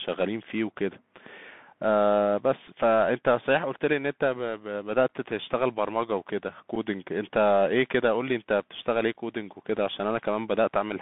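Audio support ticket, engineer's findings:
Bluetooth CVSD headset codec, whole clip: speech band-limited to about 150 Hz–3.6 kHz, scratchy s sounds, granular hiss under speech, loud high passages gritty as the one-bit delta steps fall behind. Fits a 64 kbps CVSD headset link. Hiss tracks the signal, unlike a steady noise floor.

Bluetooth headset packet repeated, 2.67 s: brief tick, about 3.8 ms of audio replayed, fitting one lost packet. Not a dropout: no silence, the prior fragment repeats.

Bluetooth headset packet repeated, 6.75 s: slightly longer tick, about 7.5 ms, fitting two consecutive lost packets. Too short to form the steady 267 Hz buzz of a long run. Headset radio link suspected.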